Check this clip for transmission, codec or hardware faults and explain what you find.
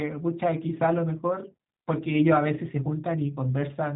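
The whole speech clip carries a G.729 codec fault. Nothing reaches above 3.8 kHz, which fits 8 kbit/s G.729A. Rebuilding each 10 ms frame from a vocal tract filter, pitch predictor and sparse pulses leaves speech plainly rough and synthetic. A spectrogram shows a hard ceiling with smeared harmonics.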